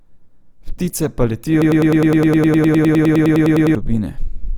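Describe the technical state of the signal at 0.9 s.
At 0.9 s the speech carries Opus compression, present across the whole clip. The grainy, rough texture, noise-filled upper bands and content reaching 20.3 kHz likely come from Opus in its CELT music mode, where thin bits fold or noise-fill bands; the damage fits about 24 kbps.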